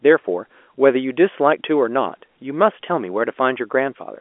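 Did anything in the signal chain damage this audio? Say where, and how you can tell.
No, nothing in the chain audibly damaged this speech.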